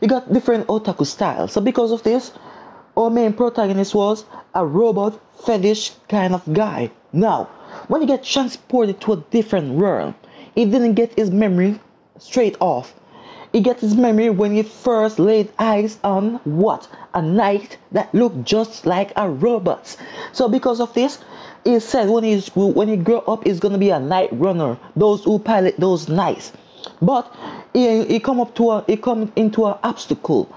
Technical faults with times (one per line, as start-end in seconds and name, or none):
0.00-30.56 gain pumping